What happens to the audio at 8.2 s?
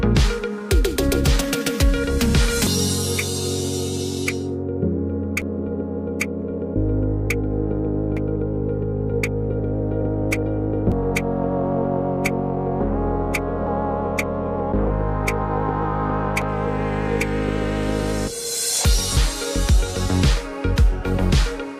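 At 8.17 s the audio skips: roughly a third of a second is missing and the two sides butt together with no gap. This is likely audio missing between chunks, lost while a 3-second processing block closed and the next one opened.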